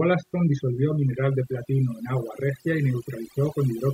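Throughout the speech, overdone noise removal is at work: the noise reducer was pushed so hard that any frequency band sitting near its noise estimate gets pulled down or switched off, taking the softer parts of the voice along with the noise. The gaps fall to near silence dotted with twinkling specks. Unlike a noise gate, which shuts everything at once, this removes individual bands independently.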